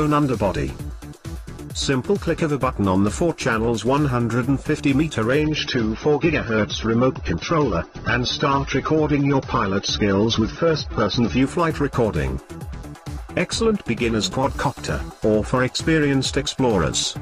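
Adaptive stream at a lower bitrate, 5.42 to 11.42 s: the connection slowed and playback switched to a leaner version, which fits AAC falling from 96 to 24 kbit/s. Quality drops abruptly without a gap, codec artefacts rise, and nothing remains above 6.3 kHz.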